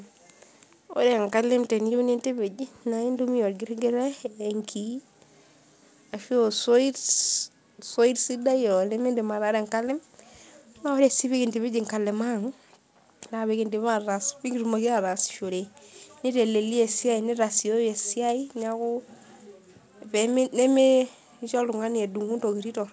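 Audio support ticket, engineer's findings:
No faults found in this speech recording.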